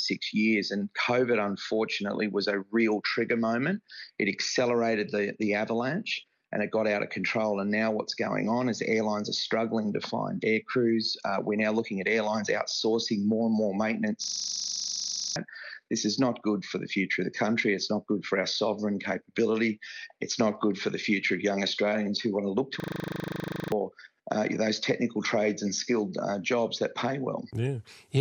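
At 14.24 to 15.36 s and again at 22.8 to 23.72 s, a system hang loop occurs. The host stalled while the hardware replayed one 40 ms buffer 28 and then 23 times, producing a coarse 25 Hz buzz and losing about a second of audio each time.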